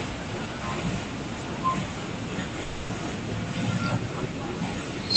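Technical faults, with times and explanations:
2.61–2.91 s, long network dropout: about 0.3 s of speech is replaced by a fading buzz or hiss continuing the sound just before it. It never falls silent, and speech resumes with that stretch lost. The likely cause is packets lost in transit and filled in by the receiver. Unlike a brief packet-loss glitch, the fill lasts long enough for its decay to be heard.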